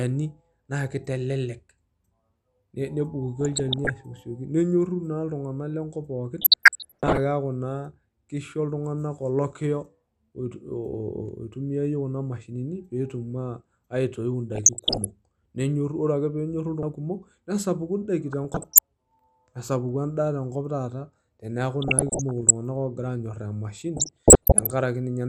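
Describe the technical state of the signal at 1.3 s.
At 1.3 s you're hearing MP2 compression, and it runs through the whole clip: the speech sounds dull and gurgly because upper sub-bands keep dropping out and the surviving bands are coarsely quantised. The likely culprit is a low-rate Layer II encode, something like 80 kbps.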